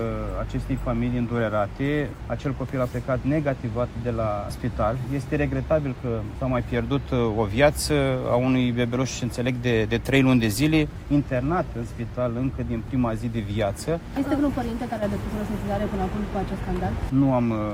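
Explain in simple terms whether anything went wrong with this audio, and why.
Nothing went wrong here: the signal holds steady throughout, with no breaks, jumps, distortion or other technical faults to be heard anywhere in the recording.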